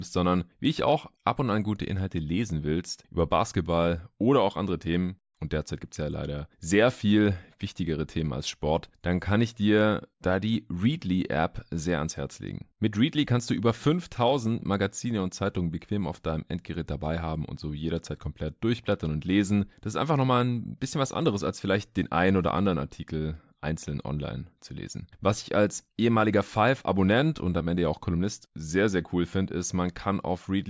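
Speech recording with no audible technical faults anywhere.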